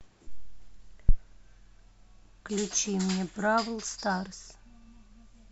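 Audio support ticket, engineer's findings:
Phantom power thump, 1.09 to 1.15 s. Deep low-frequency thump peaking at about -8 dBFS, decaying within roughly 13 ms. Probable component: input coupling capacitors at the mic preamp. Supply switched on or off on a live channel, DC step passing through the capacitors.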